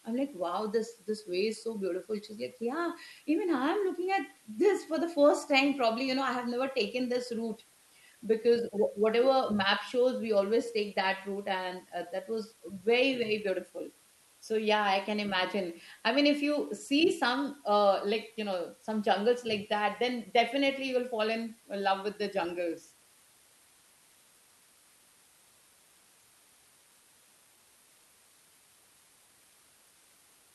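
From start to finish, a steady hiss sits under the speech. This is low bit depth with dither. The sound fits a signal reduced to about 8 bits, with dither added before rounding. The dither turns the rounding error into even white noise. So there is no grainy distortion, only a constant, flat hiss. It sits roughly 30 dB below the speech. The call path stops near 12 kHz.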